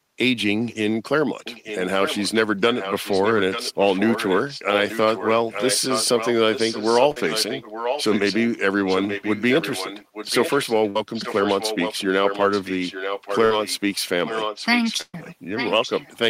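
Echo leak runs through this speech recording from 1.44 to 8.38 s, 8.88 to 13.8 s and 14.21 s to the end: a second copy of the voice trails 0.88 s behind, about 10 dB quieter, likely from a loudspeaker on the far end whose echo canceller let it through. A burst of packet loss hits at 7.11, 10.90, 13.45 and 15.01 s. Each time the receiver holds the last sound for 45 to 121 ms, then jumps ahead, skipping 40 to 120 ms. The final gap also falls silent for 40 ms.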